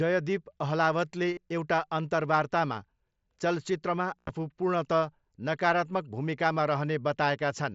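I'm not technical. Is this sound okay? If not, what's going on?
No. This speech has concealed Bluetooth headset packet loss. Audio from the headset dropped out, and the phone filled each gap by repeating recent sound. At 1.33 s it's a brief blip. At 4.19 to 4.30 s it becomes a short buzzy, held tone.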